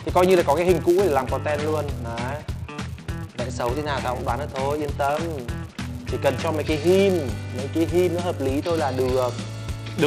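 Throughout, a filter restarted on every block adds a level-following 200 Hz buzz, visible as ticks every 5 ms in the waveform and as harmonic lines at 200 Hz spacing on a spectrogram.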